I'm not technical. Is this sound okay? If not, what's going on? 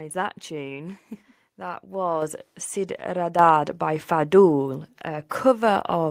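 No. Twice, the call software decided the microphone was too quiet and turned up its input volume in one sudden jump, a fault called microphone volume stepped up. It happens at 2.22 seconds and again at 3.39 seconds. Each time, the voice and the background noise both get noticeably louder at the same instant, so the level lurches upward instead of staying steady.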